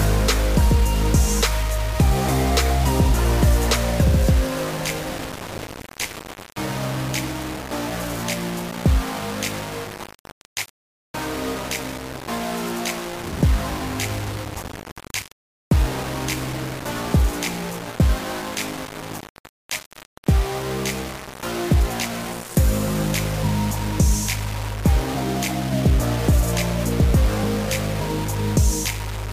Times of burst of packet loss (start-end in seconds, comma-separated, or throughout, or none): none